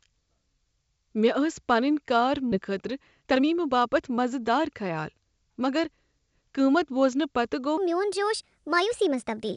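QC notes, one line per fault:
2.52 s, skip ahead: About a second of speech is missing, and the speech on either side is butted together with no gap. The receiver evidently dropped the stretch, in transit or when an overfull jitter buffer discarded it while later audio was queued. It sounds like an abrupt jump. On a waveform the envelope changes instantly with no silence, and a spectrogram shows formant tracks breaking discontinuously at one vertical line.
2.55–6.77 s, jitter buffer speed-up: Speech runs at about 110% of normal rate while pitch stays unchanged. Roughly 0.4 s in total was trimmed away in many tiny cuts of one or a few pitch periods each, as the buffer drained excess queued delay. The result sounds hurried but not higher. A spectrogram keeps harmonic spacing constant while syllables compress in time. Close up, the waveform shows repeated small splices between pitch cycles.
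7.78–9.56 s, section at the wrong speed: To the end of the clip the speech plays 1.33 times too fast, with pitch raised by about five semitones, so it sounds higher, thinner and rushed. This is likely a playback or editing stage running the section against the wrong clock. A spectrogram shows harmonics and formants shifted upward together and events squeezed in time.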